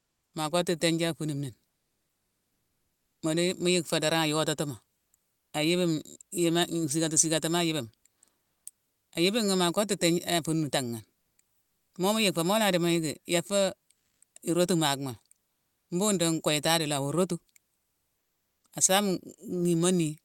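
Comfort noise in place of the background occurs at 0.0–0.33, 5.35–5.53, 11.21–11.37, 13.93–14.21, 15.53–15.89 and 17.77–18.63 s. In these pauses the faint real background is swapped for a steady, featureless hiss, likely from Opus discontinuous transmission. It usually drops by about 2 to 5 dB, though it rises by about 2 dB at 13.93 s.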